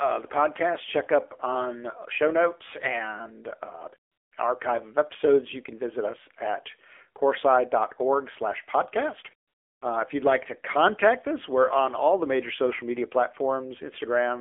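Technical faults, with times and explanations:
Throughout: AMR narrowband mobile codec. The speech has come through the AMR-NB mobile codec at 7.4 kbps. The codec samples at 8 kHz and rebuilds each 20 ms frame from a vocal-tract model excited by a handful of pulses, so nothing above 4 kHz survives, and the line band sits at roughly 300 Hz to 3.4 kHz. At this bitrate the damage is plainly audible: the voice has a buzzy, synthetic edge and a thin, boxy tone.
4.12 to 4.32 s: AMR comfort noise. For 200 ms the sender judged the talker silent and stopped transmitting speech frames. The receiver filled the gap with synthetic noise built from a coarse estimate of background level and spectrum. The genuine background drops out and is replaced by a smooth, steady hiss that switches in and then out again.
9.48 to 9.82 s: AMR comfort noise. The same substitution recurs here, lasting 340 ms.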